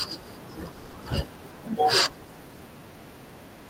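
From 0.71 to 0.95 s there is a call audio freeze. The last sound is stretched into a fading buzz for about 220 ms, with no silence. Delayed packets likely emptied the jitter buffer. The speech then resumes where it stopped, nothing lost but running 220 ms later.

At 1.58 s a call bitrate drop sets in. The encoder falls from 64 to 26 kbps and stays at that low rate for about one second. The speech turns coarse, watery and duller in the highs. It clears by 2.65 s.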